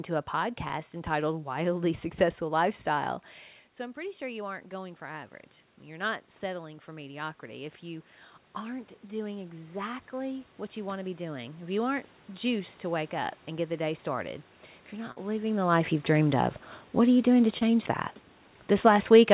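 Short concealed packet loss occurs three times, at 0.68 to 0.72 s, 15.12 to 15.18 s and 17.58 to 17.63 s. About 20 ms, then 40 ms, then 20 ms of audio never arrived. The receiver filled each gap by extending the preceding sound before blending back. Each one is heard as a brief smear or wobble. On a spectrogram, already empty above 4 kHz from the narrowband call codec, each patch shows the preceding sound carried on, from its pitch if voiced and as shaped noise if not. The waveform shows a short stretch of continued signal blending back into the real audio.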